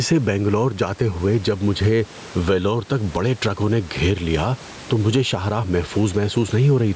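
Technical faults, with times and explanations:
Throughout, gain pumping: the level is pulled down on each loud sound, a swing of roughly 10 dB, with the room noise about 30 dB below the speech, so loud and soft parts sit closer in level and the sound is squashed, likely from excessive input gain being clamped down by a fast limiter.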